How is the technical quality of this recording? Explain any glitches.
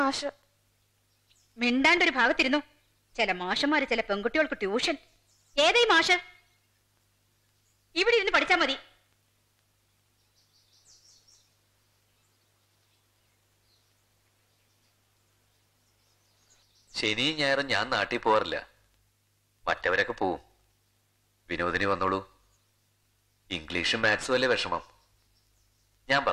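No glitches turn up anywhere in the recording. There are no dropouts, clicks or other technical faults to account for.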